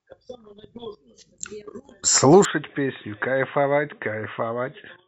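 At 2.45 s the speech abruptly turns dull and boxy, drops by around 10 dB, and stays that way to the end, with no gap at the change. Nothing above 3.8 kHz survives, and a new, faint background noise appears well below the speech, roughly 55 dB down. The likely cause is the input switched to a poorer device, such as another microphone or a headset's narrowband call profile, with its own tone, gain and noise floor.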